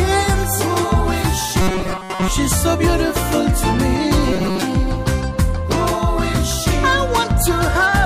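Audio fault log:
1.61–2.28 s and 4.33–4.64 s, robotic sound from repeated short buffers: the sound becomes a rigid, metallic 188 Hz buzz, likely from repeating a roughly 5.3 ms chunk for most of each span while fresh audio is skipped. Unlike dropouts, there's no silence, just a buzz at a fixed rate.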